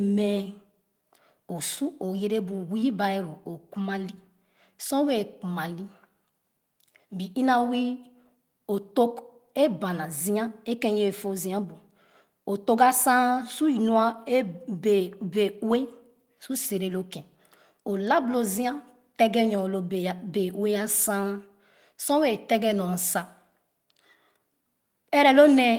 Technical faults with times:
0.00-25.79 clock drift between sender and receiver
0.13-25.74 repeated timing corrections

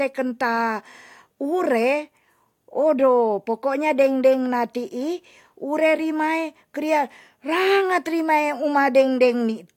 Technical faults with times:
none

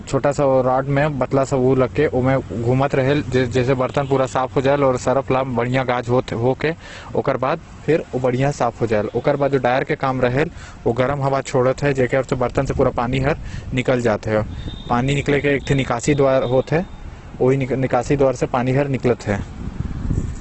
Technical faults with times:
0.00-20.41 Opus compression

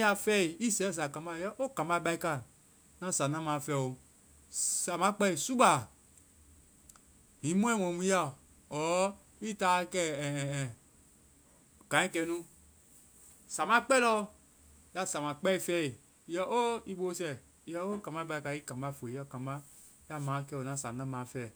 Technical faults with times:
none

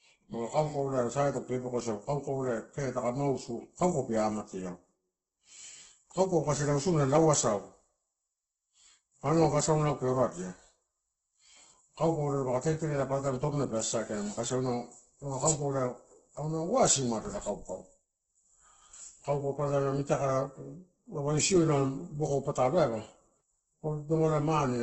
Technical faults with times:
0.00-24.82 Opus compression

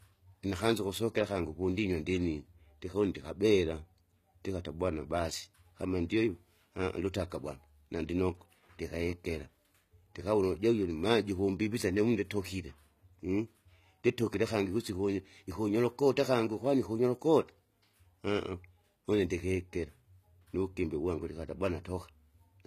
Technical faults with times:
0.00-22.66 HE-AAC compression

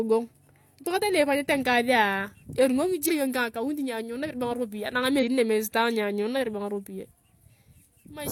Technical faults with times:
3.05-3.11 damaged data in a compressed stream
5.18-5.24 damaged data in a compressed stream

